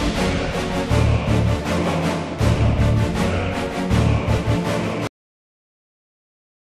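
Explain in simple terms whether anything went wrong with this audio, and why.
Something did go wrong. At 5.07 seconds, the sound stops abruptly, in the middle of what it was doing. This is a cut-off end. The last stretch of audio was never saved or played back. So instead of fading out naturally, everything drops straight into complete digital silence. That silence then runs all the way to the end of the clip. Nothing rings on or trails away. It simply vanishes.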